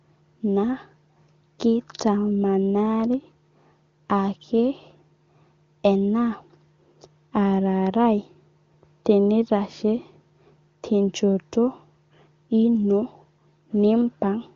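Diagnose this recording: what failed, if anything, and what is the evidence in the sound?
Nothing failed; no fault heard.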